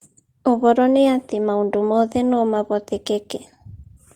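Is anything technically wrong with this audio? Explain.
No, nothing in this recording stood out as a technical problem on listening.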